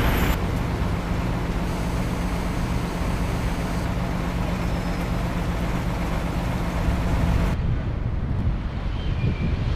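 A steady, raspy 217 Hz buzz runs from 1.67 to 3.85 s: GSM phone buzz, a nearby handset's call bursts rectified by the audio circuit.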